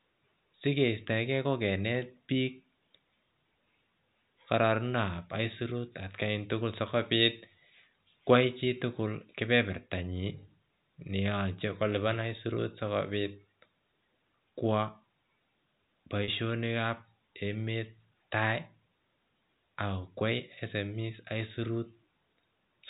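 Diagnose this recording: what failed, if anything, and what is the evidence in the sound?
A network-stage fault: packet loss with pitch repetition at 16.24–16.28 s, just before "kab emet tai". For about 40 ms, fitting two lost 20 ms packets, the last pitch period is repeated as a brief buzzy hold. A buffer underrun would instead leave a click or a hard silent gap. The G.711 telephone band, which cuts off at 4 kHz, carries through the repair.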